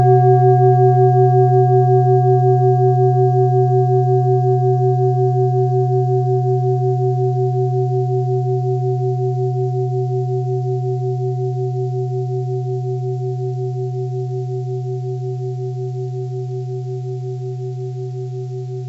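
Nothing here goes wrong; the sound just carries the ordinary character of a call path, with nothing above about 8 kHz, which fits a wideband codec like G.722.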